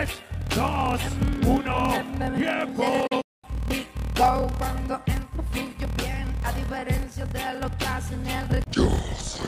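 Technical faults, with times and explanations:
throughout: block size mismatch (padded). Each 1024-sample block is zero-padded to fill a longer read block, causing a 38.3 Hz buzz and playback about 11% slow at normal pitch.
3.07–3.45 s: digital broadcast dropout. The receiver lost valid frames and muted with an 8 ms fade, leaving about 224 ms of holes over 320 ms, the longest 192 ms.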